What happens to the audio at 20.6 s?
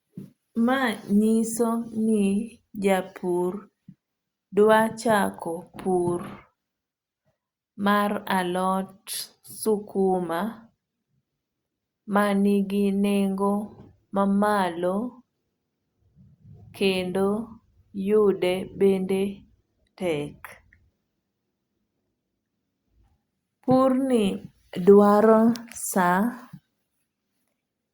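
Nothing goes wrong at 20.6 s; the speech carries on intact through that moment, with no dropout, click or distortion.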